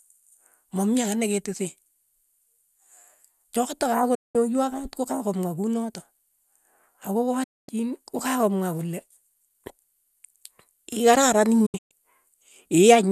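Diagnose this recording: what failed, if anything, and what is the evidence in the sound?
The failure is in digital broadcast reception: a digital broadcast dropout occurs three times in this speech. The sound fades to silence within about 8 ms and is muted from 4.15 to 4.35 s and from 7.43 to 7.69 s. From 11.66 to 11.91 s it breaks into several short holes, the longest about 0.12 s. The receiver muted while frames were missing or corrupt. The gap lengths fit frames of about 24 ms, and the programme content in those gaps is lost.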